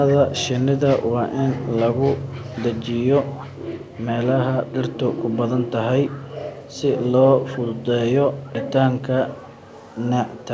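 Echo leak at 2.17–2.46, 3.26–3.95, 4.66–4.72, 8.43–8.52 and 9.43–9.67 s: faint scraps of speech return about 314 ms late, roughly 25 to 35 dB down. The likely cause is a far-end loudspeaker whose echo canceller let some pickup through, and the leak lies within the call's 8 kHz band.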